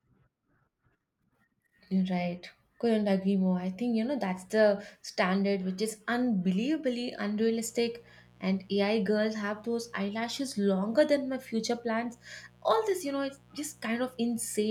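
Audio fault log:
7.50 to 14.71 s: mains buzz. A steady, raspy buzz starts at 7.50 s and runs to the end. It sits roughly 30 dB below the speech. Sharp switching spikes arrive twice per 60 Hz cycle. Their harmonics climb into the kilohertz range, which causes the rasp.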